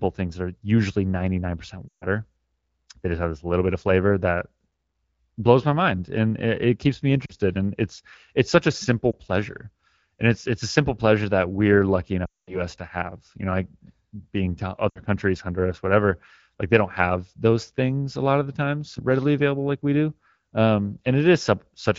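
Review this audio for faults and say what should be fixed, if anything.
Lost AMR speech frames occur where radio errors corrupted frames, so the decoder fell back on the last good pitch and vocal-tract settings at fading gain. The speech smears and dies away at 1.88–2.06 s, after "it it keeps me" at 7.26–7.32 s, after "pleasure that we're lucky" at 12.25–12.63 s (the longest, about 220 ms lost), and at 14.90–15.02 s, and a single lost frame gives a brief dip after "it's such a simple" at 9.12–9.16 s. The AMR wideband coding around these gaps is clear. Stronger channel coding or a better radio link would prevent them.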